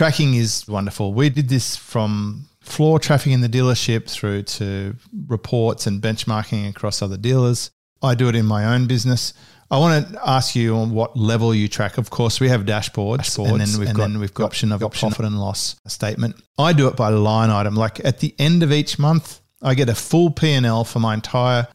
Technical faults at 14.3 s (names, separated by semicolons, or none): doubled audio track